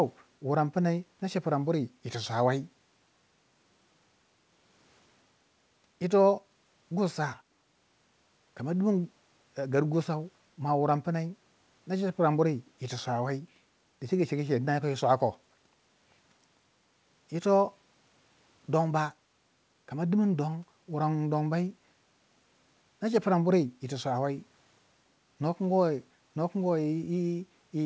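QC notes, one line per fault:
The speech sits about 43 dB above the room noise, and its bandwidth stops at 8 kHz with the coding texture of a wideband call path, which fits a G.722 codec.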